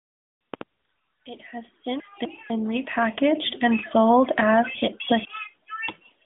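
At 2.0 to 2.5 s, just before "repackaged and sold as", and again at 4.75 to 5.25 s, just after it, the sound has chunks out of order. In each, a 250 ms block plays one block late, after the block it should precede, so the half-second comes out jumbled, with three hard joins. On a waveform and spectrogram, already cut off above about 3.7 kHz by the narrowband mobile codec, each join shows as an abrupt step and a thin vertical stripe.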